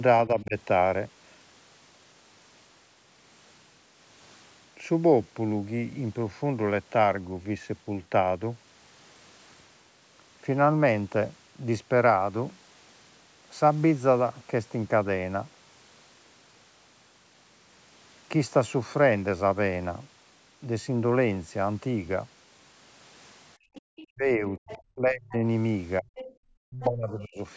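At 0.27 to 0.56 s the talker's speech dips by around 10 dB, and again at 24.14 to 25.42 s, 26.00 to 26.11 s and 26.65 to 27.47 s, sinking as far as about 40 dB by the end. This is speech suppressed in double talk, likely the echo canceller turning the near talker down along with the loudspeaker echo because both sides spoke at once. What sets it apart is that the talker's own voice shrinks or breaks up. At 23.57 to 23.86 s the background is gated by the echo canceller instead: room sound collapses by about 40 dB for a moment, then returns. Other side's voice leaking through appears at 23.74 to 24.05 s, 24.69 to 24.78 s and 26.16 to 26.33 s, likely residual loudspeaker pickup the canceller missed. It is a faint second voice, roughly 15 to 25 dB below the talker, added on top of the audio rather than taking anything away. The band stops at 8 kHz throughout.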